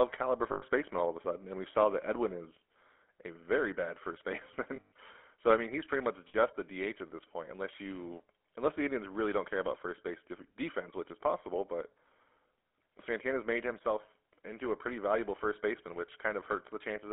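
From the start the speech carries the GSM full-rate codec's buzzy, gravelly grain, clearly audible and limited to roughly 250 Hz to 3.4 kHz. Modelled pulses replace the real excitation, consistent with 13 kbps. That roughness sets it apart from plain telephone band-limiting.

Lost GSM frames then hold the last sound as a rough, metallic ring rather than a silent gap: at 0.52 to 0.64 s, just before "baseman all of a"; at 4.76 to 4.92 s, scattered, longest run around a tenth of a second, before "so I mean he's"; and at 6.28 to 6.35 s, after "mean he's pretty much".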